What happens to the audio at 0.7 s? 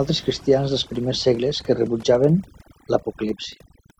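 At 0.7 s you're inside a Bluetooth SBC bit pool drop that runs from about 0.31 s to 2.25 s. The link seems to have gotten congested and the encoder cut its bit budget, which fits the bit pool falling from around 31 to about 14, roughly 99 kbps. With that few bits the top sub-bands get starved and the rest are quantised coarsely, so the treble goes dull and a gritty grain creeps in until things recover after 2.25 s.

On top of that, the whole clip has overdone noise removal. The noise reducer was pushed too hard, so any frequency band close to its idea of the noise gets pulled way down or switched off, and the quieter bits of the voice get dragged down with it. At 0.7 s that shows up as a lowered background that breaks up into little twinkling specks.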